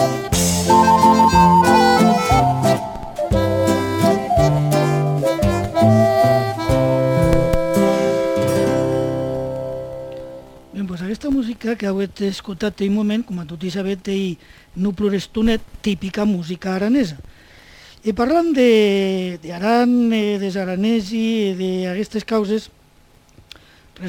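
No technical faults can be heard anywhere in this recording.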